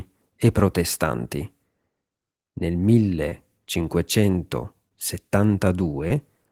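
Short concealed packet loss occurs at 3.29–3.34 s, 4.89–4.92 s and 6.08–6.12 s: each time about 20 ms of speech arrived too late and was synthesised from the preceding sound. The result is a brief smear or wobble, seen as smoothed, repeated harmonics or shaped noise bridging a small waveform gap.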